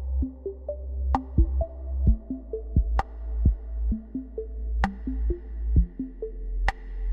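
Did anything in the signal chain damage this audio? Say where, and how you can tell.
Yes, there's one spot of damage: a dropped sample at about 1.65 s. You hear it as a lone sharp click, and in a spectrogram it shows up as a thin vertical line running right up the spectrum. Roughly a single sample has gone missing, far too little to take out any actual sound. The waveform just jumps straight to a later value, and that step is the click. The likely culprit is the driver or buffer stage hiccupping for an instant.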